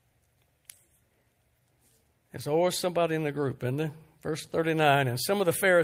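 At 2.81 to 2.83 s, just before "in the group isn't", a 20 ms stretch turns briefly rough and grainy with no gap. This is a lost packet rebuilt from error correction: the next packet carried a low-bitrate spare copy, which fits a single lost packet, and the decoder played that coarser copy instead. The same brief roughness returns at 4.43 to 4.45 s.

At 4.47 to 4.51 s comes a short smear, where about 20 ms of sound is stretched over rather than heard cleanly. This is short concealed packet loss. The audio arrived too late to use, so the decoder carried the preceding sound forward to fill the hole and then blended back into the real signal. It runs straight into another rough 20 ms error-correction rebuild at 4.51 to 4.53 s.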